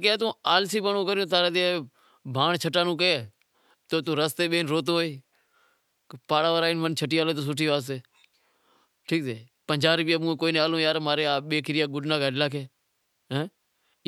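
Nothing stood out on listening to this speech recording.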